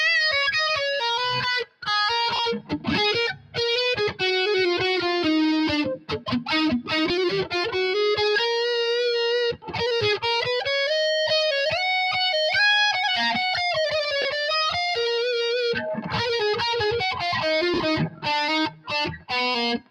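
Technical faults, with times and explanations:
Throughout: noise suppressor applied to music or sounds. A speech-tuned suppressor keeps treating sustained parts and decay tails as noise, so the level wobbles by a few dB. Attacks get through while held tones and tails sag, giving a pumping, thinning feel.
1.64 to 19.31 s: sound cut by the noise suppressor, at 1.64–1.88, 2.60–2.87, 3.34–3.57, 5.97–6.28, 9.53–9.75, 18.10–18.25, 18.70–18.91 and 19.16–19.31 s. Each dip lasts about 0.15 to 0.3 s, as the suppressor decides a steady or fading stretch is noise and ducks it hard, by about 12 dB at the mildest and about 21 dB at 1.64 s. Decays get cut short while sharper onsets mostly survive.
2.36 to 17.82 s: lost LE Audio frames, at 2.36–2.39, 7.09, 14.22–14.25 and 17.74–17.82 s. The gaps are 30, 10 and 30 ms, plus about 50 ms scattered over 80 ms at the end. That fits dropped 10 ms Bluetooth frames. 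The LC3 decoder fills each gap by replaying the last spectrum with scrambled phase, so tonal sound briefly turns into a noisy smear instead of a clean dropout.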